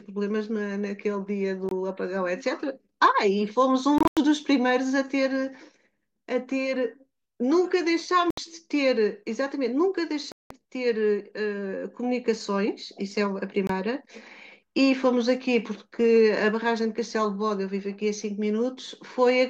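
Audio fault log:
1.69 to 13.70 s: Bluetooth dropout, at 1.69 to 1.72, 3.98 to 4.17, 8.30 to 8.38, 10.32 to 10.51 and 13.67 to 13.70 s. The speech drops to silence, then resumes as if it had played on. Gaps come in steps of about 23 ms, which fits lost wireless packets. The 3.98 s event is broken into scattered gaps. Late packets were likely discarded.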